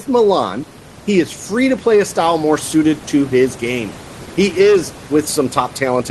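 Nothing's technically wrong with this bit of speech, which comes through an ordinary Opus call at about 20 kbps, with some quiet room noise sitting well beneath it.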